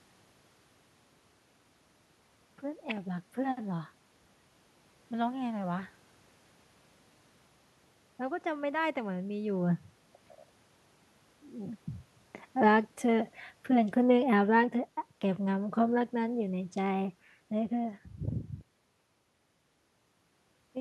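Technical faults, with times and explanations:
12.52 to 14.75 s, automatic gain falling: the level eases down by about 4 dB over roughly two seconds as the gain control decides the input is too loud or too noisy and pulls its gain back. The steady room noise sinks together with the speech, which separates it from the talker moving around 9.5 s and again near 20 s, where the voice changes level while the background stays put.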